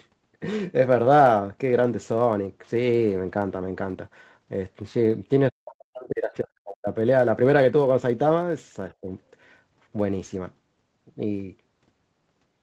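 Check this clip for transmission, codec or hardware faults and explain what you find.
Two faults are audible: a block size mismatch running throughout, and speech suppressed in double talk at two points. The Opus call path's 8 kHz bandwidth ceiling is expected, not a fault.

Throughout the clip, a block size mismatch (truncated) means one stage writes longer blocks than the next reads and discards the remainder. This produces a steady buzz near 91.9 Hz, with the pace essentially unchanged.

From 5.50 to 6.87 s, the echo canceller likely pulled the talker down during double talk. The speech drops by about 40 dB for roughly 1.5 s. From 8.89 to 9.11 s, the same suppression produces a brief, shallower dip of about 15 dB.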